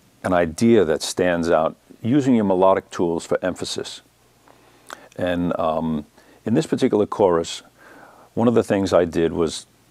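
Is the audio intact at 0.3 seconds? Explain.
Yes, the audio is intact at 0.3 seconds, with no fault present at that moment.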